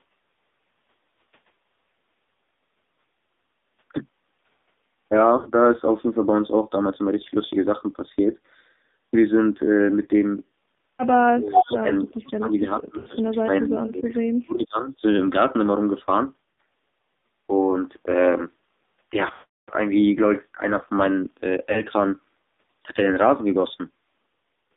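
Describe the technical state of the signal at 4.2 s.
At 4.2 s, as across the whole clip, the speech has passed through an AMR narrowband mobile codec at a low rate that fits the 5.9 kbps mode, confining it to roughly 200 Hz to 3.7 kHz. The sparse pulse-driven vocal-tract model leaves heavy damage, with a dull, buzzy, synthetic voice.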